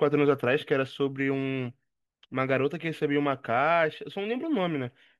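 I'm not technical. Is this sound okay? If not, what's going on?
Yes, nothing in this recording points to a technical fault, so there's nothing to fix.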